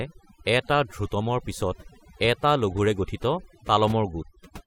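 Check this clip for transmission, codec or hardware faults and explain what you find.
The speech carries one fault, present from start to finish. Between phrases the background falls to near silence dotted with twinkling specks. This is overdone noise removal: a denoiser set too aggressively shuts down individual frequency bands near its noise estimate, taking the quieter parts of the voice with it.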